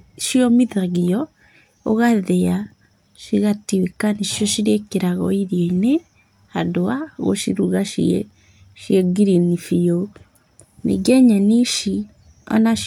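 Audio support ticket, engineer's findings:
Listened to the full speech recording and found nothing that stood out as a fault.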